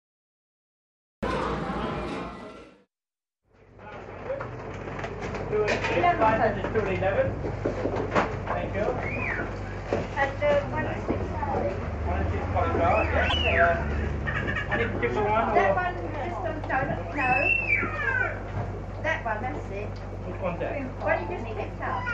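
From 0 to 1.23 s the file holds pure digital silence, and the audio then begins abruptly mid-sound with no attack or fade-in. This is a cut-off start: capture began late. The waveform shows a flat line jumping straight to signal at 1.23 s.

At 13.29 to 13.34 s, a stretch of about 56 ms, the audio jumps ahead with a brief garbled disturbance, likely a broken MP3 bit reservoir. Frames were lost, so the next frames read borrowed bits from the wrong data. The length fits roughly two 26 ms frames and appears as a narrow smeared patch across the spectrogram.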